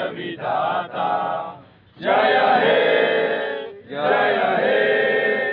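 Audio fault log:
No fault is heard in the audio.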